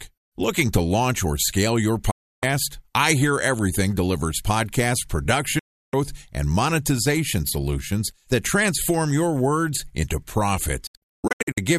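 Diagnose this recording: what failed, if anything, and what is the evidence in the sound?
The speech snaps to silence through a quick 8 ms fade at 2.11–2.43 s and 5.59–5.94 s, then breaks into short holes between 10.87 and 11.58 s, longest 120 ms. This is a digital broadcast dropout: the receiver muted on lost or corrupt frames, discarding that audio.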